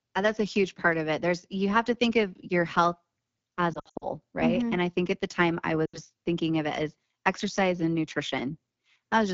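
Throughout the speech, the AMR wideband (HD Voice) codec runs at a very low rate, consistent with one of its two lowest modes, around 8.85 kbit/s. Its pulse-driven vocal tract model is starved of bits, so voices sound rough and raspy, with a thin noise-filled top near 7 kHz.

From 3.74 to 4.09 s, lost AMR speech frames occur as radio errors corrupt frames. The decoder repeats its last good pitch and vocal tract settings at falling gain. About 180 ms is lost across 280 ms, in runs up to 60 ms, which fits roughly nine 20 ms frames. The result is warbling dips and brief fades. A second loss at 5.85 to 5.99 s (80 ms) fades the sound quickly before it returns rough.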